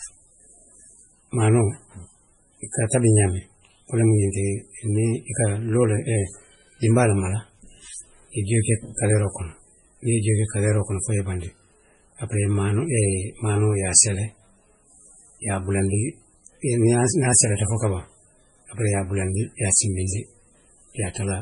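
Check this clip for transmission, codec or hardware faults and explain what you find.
One fault runs through the whole speech recording: heavy damage consistent with MP3 compression, likely from a low-bitrate encode. Nothing is present above 10.5 kHz, so the treble ends abruptly at a fixed cutoff. The degree of damage fits a bitrate around 24 kbps. Starved of bits, the encoder dropped weak frequency lines that flicker in and out between frames, giving the speech a watery, swirly texture, metallic chirps on sibilants, and smeared consonant attacks.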